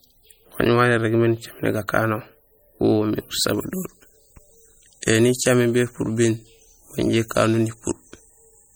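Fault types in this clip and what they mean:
MP3 compression: plainly audible watery, swirly artefacts throughout the speech as weak frequency lines drop in and out, likely from an MP3 encode around 48 kbps.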